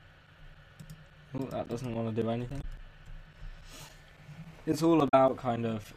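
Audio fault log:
2.61–2.64 s and 5.08–5.14 s, damaged data in a compressed stream: two short bursts, about 40 ms and 65 ms long. Corrupted bytes made the decoder misread those frames, so it output garbage until it found a valid frame header again. A plain dropout would leave silence and a lone click would be a single spike, but here the decoder lost sync within the stream.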